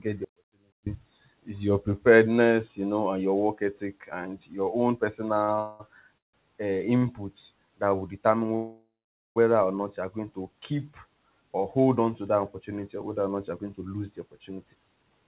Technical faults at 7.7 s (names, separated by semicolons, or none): jitter buffer slow-down